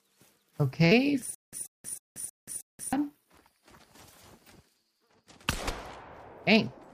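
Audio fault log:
0.91 s, compressed frames skipped: the sound jumps ahead by about a tenth of a second. The jump fits roughly ten 10 ms frames that were missing or rejected by the decoder.
1.35 to 2.93 s, stutter with silent gaps: a 135 ms fragment repeats five times, each followed by 181 ms of dead digital silence, so a burst recurs every 316 ms. This is likely a stalling stream replaying its last fragment on each retry, and the sound that belonged there is lost.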